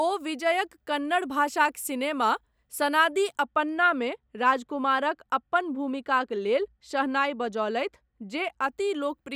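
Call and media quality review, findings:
De-emphasis applied wrongly, 3.46 to 8.64 s, starting after "कन्नड़ भाषाक सिनेमा सनादि". Speech turns dull and muffled. Treble cut with no matching pre-emphasis, about 11 dB down at 10 kHz relative to 1 kHz. Gradual roll-off, unlike a low-pass filter's hard cutoff. Suspect the receive EQ or decoder de-emphasis stage.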